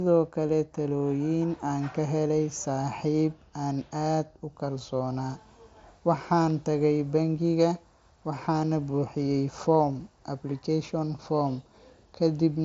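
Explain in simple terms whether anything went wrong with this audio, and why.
Nothing went wrong here.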